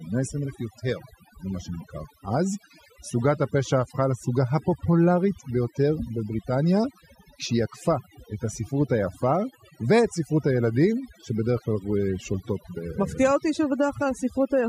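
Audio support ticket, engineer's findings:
Overdone noise removal, present for the whole speech clip. Background drops between phrases, with twinkling specks where isolated bands flicker on and off. Probable component: a noise reduction stage set too aggressively. Mechanism: bands falling near the noise estimate get cut hard or gated out. Quiet voice detail sits near that estimate, so it is stripped along with the noise.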